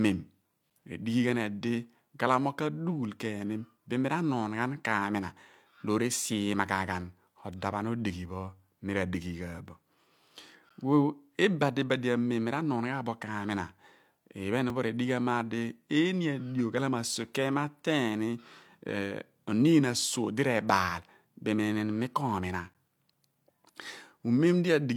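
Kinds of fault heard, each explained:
Gap between stream segments: The speech stops dead for a few milliseconds, with hard edges, then carries on. Nothing is lost. Silence is added where two segments' timestamps fail to meet. Holes fall at 0.70, 10.69, 14.70 and 22.74 s, 3 to 14 ms long, matching 2-second segment boundaries.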